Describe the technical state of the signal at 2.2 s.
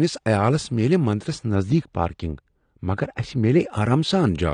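At 2.2 s the speech sounds dull and muffled, with the top end sloping away smoothly. This is de-emphasis applied wrongly, running from 1.55 s, just after "عیالس میلہ مندرس", to 3.60 s. A treble cut meant to reverse pre-emphasis has landed on audio that either never had pre-emphasis or had already been corrected once. The response falls steadily with frequency, reaching about 11 dB down at 10 kHz relative to 1 kHz.

Across the whole clip, including this moment, there is plainly audible codec damage. The speech is smeared and dull, with a warbling or fizzy texture on sustained sounds and sibilants. This is AAC compression, likely AAC-LC at a bitrate that fits 32 kbps. At that rate the encoder lowers its cut-off and quantises spectral lines coarsely against its hearing model, leaving holes in the spectrum or filling bands with substitute noise.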